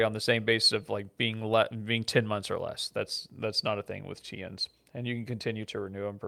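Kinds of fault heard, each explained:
Nothing in this speech recording stands out as a fault; no glitches, dropouts or distortion turn up anywhere along the way.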